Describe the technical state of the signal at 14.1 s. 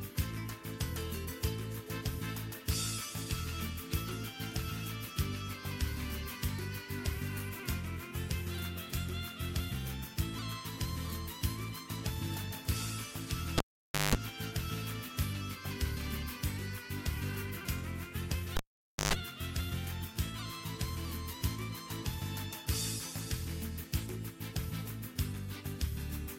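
At 14.1 s the signal is inside a cable pulled and plugged in event running from 13.58 to 14.15 s. A live lead is withdrawn for about 522 ms, then re-seated: pops bracket the gap, and a 184 ms burst of 50 Hz mains buzz while only the tip connects sets it apart from a clean dropout.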